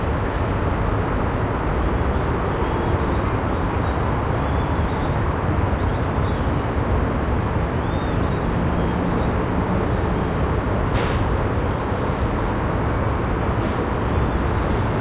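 No technical faults are audible.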